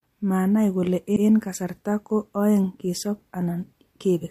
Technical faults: repeated frames

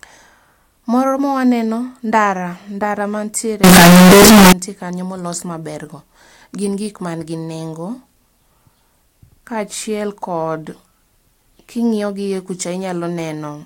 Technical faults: float read as integer

